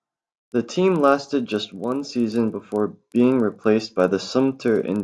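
Throughout the speech, a resampler restarted on every block adds a steady 25 Hz ticking, almost a rough buzz, under the signal. The 48 kHz to 24 kHz conversion was run on 40 ms blocks independently, so each block edge lacked its true neighbouring samples and picked up a small error. On a waveform, tiny discontinuities recur every 40 ms; a spectrogram shows faint vertical lines at that spacing, present only where sound is.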